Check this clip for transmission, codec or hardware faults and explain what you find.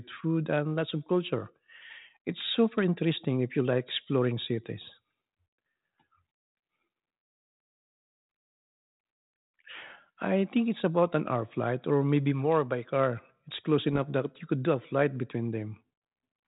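One fault stands out: bit errors on an ADPCM link, from 13.89 to 14.00 s, just before "that you could do". The audio comes through telephone-band G.726 coding, with light damage that fits the 32 kbit/s DECT rate. Here, a small fraction of a percent of bits arrive flipped. Each bad bit throws off the decoder's step size and prediction, so the error rings on briefly. You hear a short cluster of pops and rough, grainy bursts, with the level jumping for a moment.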